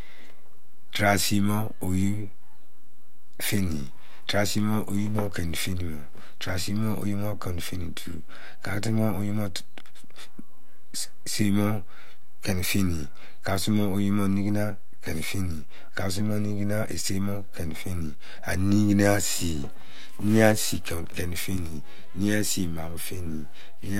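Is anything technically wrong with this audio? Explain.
Yes. A DC offset runs throughout the clip, from start to finish. The speech waveform sits on a constant shift of about -26 dBFS rather than centring on zero, so every cycle rides above or below the midline by the same amount. You don't hear the shift itself. It shows instead as steady energy at 0 Hz, and it eats into the headroom, leaving peaks on one side less room than they should have.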